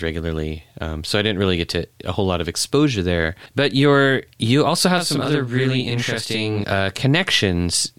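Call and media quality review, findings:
Channel delay (doubling), 4.98–6.64 s, after "you're you also": mono downmix sums one channel 40 ms late; speech doubled. Waveform shows repeated onsets; spectrogram shows fine comb striping.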